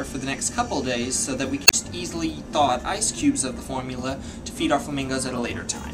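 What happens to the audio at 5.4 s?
Damaged data in the compressed stream hits at 5.36 to 5.38 s, just before the point asked about. Over those roughly 24 ms, the bytes the decoder receives no longer form valid frames, so it misreads or discards them, loses sync and hunts for the next usable frame header. The result is a brief chirp, squawk, click or short hole.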